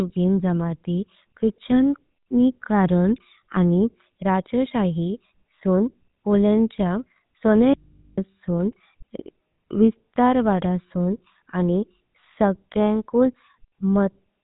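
GSM full-rate codec coding runs through the whole of this speech recording: the vocal tract is modelled and excited by sparse, regularly spaced pulses, giving a plainly buzzy, gravelly roughness, and the band stops at 3.8 kHz, which fits the 13 kbps GSM full-rate coder. An audio dropout to a faint residue runs from 7.74 to 8.18 s, about 0.44 s, where the voice cuts abruptly to low mains hum roughly 35 dB down, likely a lost signal feed while the downstream input stayed live.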